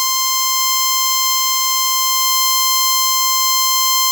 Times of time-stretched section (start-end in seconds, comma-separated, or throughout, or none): 1.12-4.12